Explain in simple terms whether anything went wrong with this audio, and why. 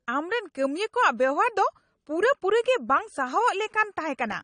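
Yes, the speech is damaged from start to finish by what is most likely AAC compression. Nothing sounds above about 9.7 kHz, so it is dull, and the codec's damage is plainly audible as a swirly, fizzy texture on hissy sounds, which a simple muffling filter would not add.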